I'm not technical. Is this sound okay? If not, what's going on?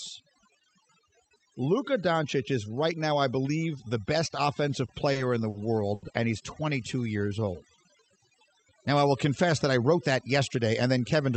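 No, there are several problems in this speech recording.

Overdone noise removal runs through the whole clip. The background drops and breaks up into twinkling specks.

Short stalls from a late packet occur at 4.85–4.90, 5.12–5.17, 5.49–5.56 and 5.94–6.04 s. Each time, the receiver held the current sound for 30 to 80 ms while waiting for the data, and nothing was lost.

A jitter buffer slow-down from 7.03 to 7.53 s makes the speech play at about 90% speed without lowering the pitch. About 58 ms was added by repeating tiny pieces.

A jitter buffer speed-up from 9.48 to 10.74 s plays the speech at about 107% speed, cutting out roughly a tenth of a second, so that stretch sounds slightly hurried.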